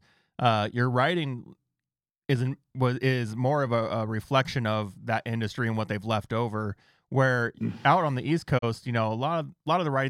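At 8.57 s, just after "out on the east", a digital broadcast dropout begins. The receiver failed to decode the incoming data and muted. The sound fades out over 20 ms. Then 32 ms is missing, which fits one lost frame. Sound returns at 8.64 s.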